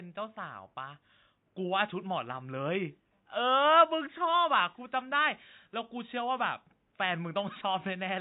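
From start to finish, the speech sounds dull and smeared. The top end is cut short, and sibilants turn fizzy and watery. Sustained sounds carry a warble, and the room noise sits about 48 dB below the speech. The likely cause is AAC compression. The damage is plain enough to point to a low bitrate, around 32 kbps. At that rate the encoder lowers its cut-off and leaves gaps in the spectrum.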